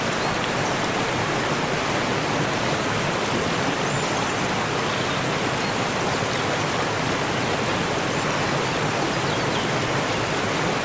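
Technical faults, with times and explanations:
No technical faults can be heard anywhere in the signal.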